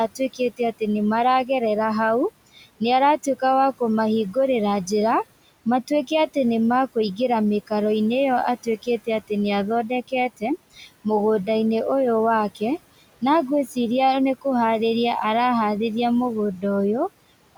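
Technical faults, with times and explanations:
Throughout: noise suppressor artifacts. The suppressor judges which frequency bands hold steady background and pulls them down, frame by frame, by about 17 dB. The room noise, sitting about 19 dB under the speech, therefore drops away in the gaps and climbs back whenever speech returns, so the background pumps with each phrase.
0.08–0.6 s, 8.63–8.87 s, 10.76–10.87 s: speech cut by the noise suppressor. In these spots the suppressor mistook parts of the speech for background and turned them down with it, by up to about 14 dB in the first instance, about 10 dB at 8.63 s and about 9 dB at 10.76 s. Only fragments are hit, roughly 150 ms in the opening stretch and around a tenth of a second in each later one, so soft consonants or word tails sound swallowed and briefly faint.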